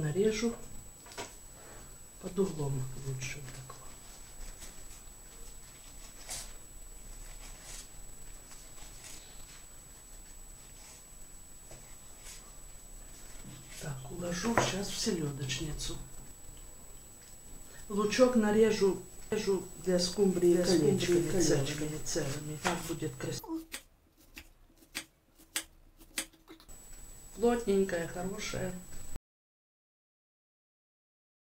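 From 19.32 s to 22.88 s the audio carries a doubled audio track: a second full-band copy trails the original by roughly 0.7 s at about 5 dB lower, dry and switching on and off abruptly, likely a second capture path or misaligned edit layering duplicate material. At 29.16 s the signal hits an audio dropout to silence, falling to silence with no room tone and staying silent through the end of the clip, likely from a lost input device or link while recording continued.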